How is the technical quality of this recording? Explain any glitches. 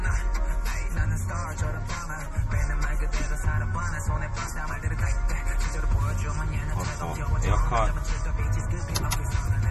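Quality is limited by clear compression damage throughout. Nothing is present above 14.8 kHz, and the audio sounds watery and swirly. That points to likely MP3 compression at a low bitrate near 40 kbps, which cuts the treble and switches weak frequency lines on and off.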